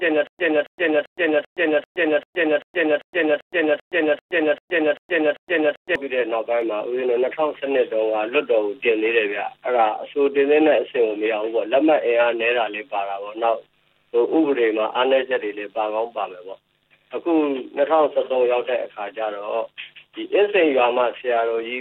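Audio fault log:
0.0–5.95 s, stutter with silent gaps: already under way when the clip opens, the same short burst of about 272 ms plays again and again, each time cut off by about 119 ms of dead digital silence, so it returns every 392 ms in a steady mechanical rhythm, 14 times in all. The likely cause is a stalled player or stream that replays its last fragment on each retry and then runs dry; whatever audio belonged in that span never plays.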